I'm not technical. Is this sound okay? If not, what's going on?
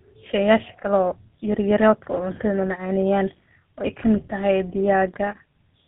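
No. Throughout, the speech shows tandem speech coding: it passed through two phone speech coders in turn. Each coder roughened the last, so it sounds muffled and warbly, with nothing above 3.8 kHz.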